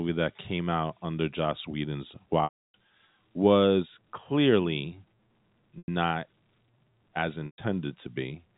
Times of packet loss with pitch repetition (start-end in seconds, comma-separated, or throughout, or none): 2.44-2.74, 5.78-5.88, 7.46-7.58